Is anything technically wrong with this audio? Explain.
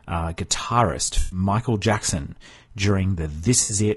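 Yes, two things. The whole clip has grainy, rough speech with noise between the harmonics and a thin top end, likely low-delay AAC compression at a low rate, around 32 kbps by the sound. Its short frames can't resolve pitch cleanly.

There's also AAC frame loss with concealment at 1.19–1.39 s and 3.63–3.73 s, about 120 ms and 60 ms gone. The decoder papers over each gap from the last good spectrum, so you hear a smeared, noisy patch.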